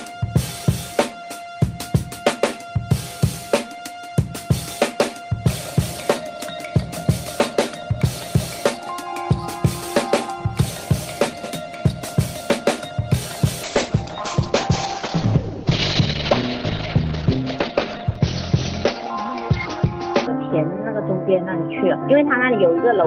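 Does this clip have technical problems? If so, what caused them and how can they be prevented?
Yes. A call bitrate drop starts at 13.67 s and runs to the end: the bandwidth estimate fell, so the encoder coded far more coarsely, fitting a fall from about 40 kbps to 9 kbps, and sound turns rough and muffled. A spectrogram shows content above 6 kHz vanishing, where it previously reached 20 kHz, with blurrier texture below. Better network headroom or congestion control that reduces bitrate gradually would prevent it.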